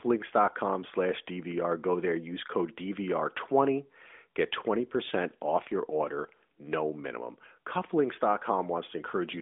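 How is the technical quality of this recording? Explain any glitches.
Nothing to worry about here: there are no glitches to explain, just the narrow phone-line sound of a 12.2 kbps AMR narrowband mobile call, with nothing getting through above 3.7 kHz.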